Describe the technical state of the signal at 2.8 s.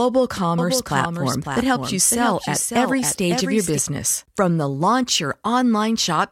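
At 2.8 s you're inside a doubled audio track that runs from about 0.58 to 3.78 s. A second full-band copy of the speech trails the original by roughly half a second, a few dB quieter, dry with no room tail, and it cuts in and out abruptly. The likely cause is a slower second capture path mixed back in.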